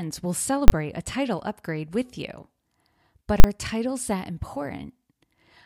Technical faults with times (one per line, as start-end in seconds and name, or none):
0.68 invalid numbers at full scale
3.40-3.44 invalid numbers at full scale